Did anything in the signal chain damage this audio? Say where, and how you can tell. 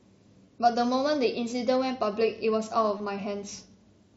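Yes. The damage comes from the Bluetooth link between headset and phone, as concealed Bluetooth headset packet loss. There are brief glitches at 0.46 s and 2.98 s, each about 15 ms, which fits two lost frames. The receiver filled each gap by repeating recent waveform, so each sounds like a tiny buzzy blip. The mSBC headset codec's wideband sound runs on either side.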